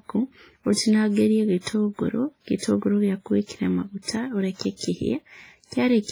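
Throughout the speech there is heavy, washy coding damage with a ringing edge and a hiss that rises and falls with the signal, most likely from WMA compression at a low bitrate; the heaviness fits something around 24 kbps. The transform coder has coarsely quantised each long block and dropped weaker components. On a spectrogram this appears as a thinned, patchy upper band with gaps where quiet detail was zeroed, and smeared, blocky energy around each syllable instead of clean edges.

Pre-echo occurs five times: at 2.58–2.62 s (about 44 ms), 3.45–3.49 s (36 ms), 4.02–4.08 s (56 ms), 4.55–4.60 s (50 ms) and 4.76–4.81 s (42 ms). In each case a sharp attack falls late in a coding block. The noise budget set by that loud onset spreads back into the quiet stretch before it, so a short hiss runs ahead of the attack and the onset sounds softened. On a waveform, a fuzzy ramp precedes each transient. 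On a spectrogram, a broadband smear starts tens of milliseconds before the attack.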